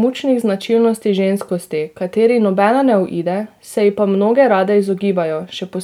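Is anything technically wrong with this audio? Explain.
No, nothing technically wrong turns up anywhere in this speech recording.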